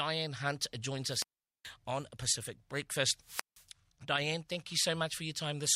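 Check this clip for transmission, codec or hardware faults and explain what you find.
Two wireless microphone squelch dropouts interrupt the speech. The first runs from 1.05 to 1.73 s, with about 0.42 s of near silence. The second runs from 3.20 to 3.66 s, muting for about 0.17 s. In each, the radio link from the FM transmitter weakens. The receiver's squelch then shuts the output to block the noise. You hear a brief swell of hiss, a hole, then the speech returning.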